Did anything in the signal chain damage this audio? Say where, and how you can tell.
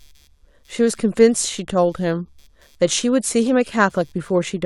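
Yes: computer activity noise runs through the whole speech clip, a faint chirping buzz pulsing at around 150 Hz and roughly 40 dB below the speech. It arises in the analogue wiring: processor and graphics load shift the shared ground, so the buzz tracks the machine, not the talker.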